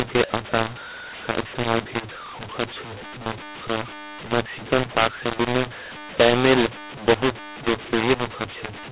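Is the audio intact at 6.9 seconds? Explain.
No. At 6.9 seconds, as throughout the clip, the speech shows a mu-law and A-law mix-up: mu-law telephone samples are decoded as A-law, which scrambles their levels. The speech sounds harsh and distorted, and low-level passages fill with noise instead of falling quiet.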